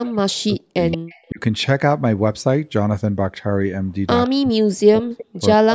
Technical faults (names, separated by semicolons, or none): speech suppressed in double talk; echo leak